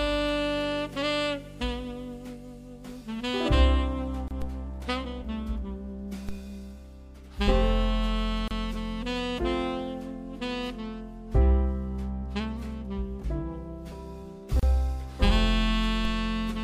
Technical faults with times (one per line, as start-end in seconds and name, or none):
4.28-4.31 gap at a join of encoded pieces
4.42 DC step
6.29 DC step
8.48-8.51 gap at a join of encoded pieces
14.59-14.63 gap at a join of encoded pieces
16.05 DC step